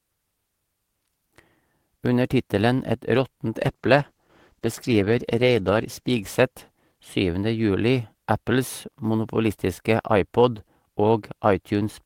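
From 3.63 s to 7.43 s the speech goes through a call bitrate drop. The bandwidth estimate fell and the encoder coded far more coarsely, bottoming out for 2.24 s. The sound turns rough and dull, which fits a fall from 32 kbps to about 13 kbps.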